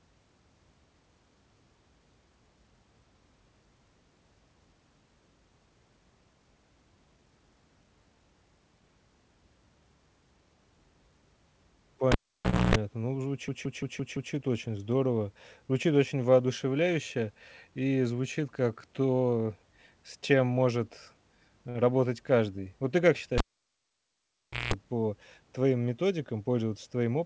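At 12.12 s a cable is pulled and plugged in again: a pop, about 0.59 s of near silence, then 0.28 s of 60 Hz mains buzz while only the tip makes contact, and a second pop as the audio returns.

From 13.48 to 14.34 s a system hang loop repeats one 170.67 ms slice five times, a stutter at 5.86 Hz. The frozen driver left the hardware cycling its ring buffer, which fits an 8192-sample buffer. Essentially nothing is lost.

Between 21.70 and 21.77 s there is a short stall from a late packet. The jitter buffer ran dry, so the receiver held the last sound for 49 ms and resumed where it left off. Nothing is missing, but playback is now 49 ms later.

From 23.38 to 24.74 s the cable is pulled and plugged in again, with pops at both ends. This time the near silence lasts about 1.35 s and the 60 Hz buzz about 0.19 s. Throughout the clip, the G.722 call path leaves nothing above 8 kHz.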